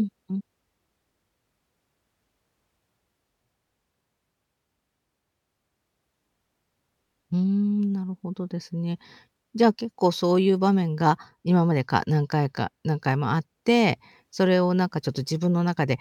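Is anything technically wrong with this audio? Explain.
No, nothing technically wrong can be heard here.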